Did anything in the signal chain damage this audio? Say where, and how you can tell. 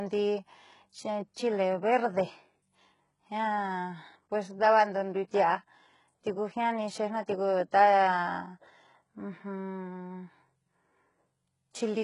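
Yes. Throughout the speech, the sibilants sound gritty and metallic, the treble is detached from the lower voice, and nothing reaches above about 11.1 kHz. This is heavy codec damage, most likely from HE-AAC compression at a bitrate consistent with roughly 12 kbps. The codec keeps only the lower band and rebuilds the treble by copying it upward, so the upper harmonics don't line up with the real ones.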